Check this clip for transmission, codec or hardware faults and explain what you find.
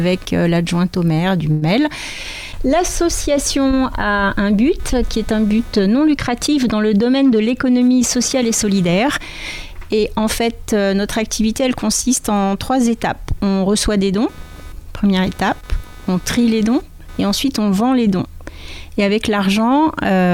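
Three faults are audible: a hardware noise running the whole way through, a brief transmission stall, and a stretch where playback catches up.

Computer activity noise, throughout: load changes in the computer's processor, graphics card or mouse disturb the ground shared with the audio circuit, and that disturbance rides into the signal. The result is a buzzy, chirping texture pulsing at roughly 300 times per second, sitting about 30 dB below the wanted sound. It comes and goes with the machine's activity rather than with anything in the audio itself.

Call audio freeze, 1.51 to 1.64 s: the likely cause is packets held up in transit, leaving the receiver's jitter buffer empty. With nothing new to play, the receiver stretched the last fragment into a fading buzz or hiss for about 105 ms. When the packets arrived, the audio resumed exactly where it had stopped. Nothing is lost, but a short gap has been inserted, and everything after it runs about 105 ms later.

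Jitter buffer speed-up, 6.96 to 8.36 s: the receiver's buffer had built up more audio than its target, as happens when delayed packets arrive in a bunch. To shrink the backlog, it repeatedly cut out tiny slices of one or a few pitch cycles, trimming about a tenth of a second in total. The sound plays at 107% speed over this stretch without any change in pitch, so it comes across as slightly hurried.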